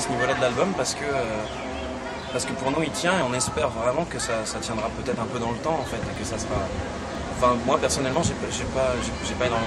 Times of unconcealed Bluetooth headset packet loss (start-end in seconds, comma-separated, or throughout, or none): none